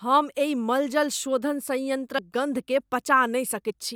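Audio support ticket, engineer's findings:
Compressed frames skipped, 2.18 s and 3.69–3.71 s. Speech jumps ahead. About 40 ms lost at 2.18 s, about 70 ms at 3.69 s, roughly two and three whole frames. Frame length 21.3 ms, which fits 1024-sample frames at 48 kHz. Probable component: file or decoder. Frames missing or rejected as damaged.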